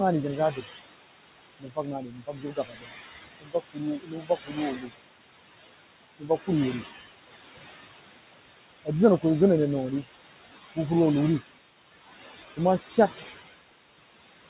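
Right from the start you get noise suppressor artifacts: the room noise, sitting only about 7 dB under the speech, gets pushed down by about 18 dB between phrases and swells back under them, all band-limited to 4 kHz by the phone-grade call path.

The suppressor also mistakes parts of the speech for noise. Right after "ri jenh", 0.36 to 0.66 s dips about 12 dB. There are deeper cuts of up to about 20 dB at 1.6–2.93 s (around a second in all), 3.4–3.81 s, 3.99–4.58 s and 6.18–6.48 s, a lighter one of about 11 dB at 4.75–4.91 s, and about 14 dB at 12.79–12.98 s after "kuh mah". Endings and soft sounds come out swallowed and faint.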